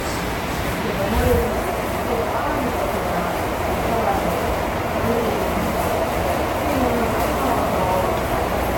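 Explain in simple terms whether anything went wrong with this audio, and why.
Yes, the whole clip has a smeary, swirling, hollow quality with blurred attacks, a sign of generation loss. It was likely compressed around four times over. Each pass added new damage, which is worse than one rough compression would cause. Nothing survives above 17.3 kHz.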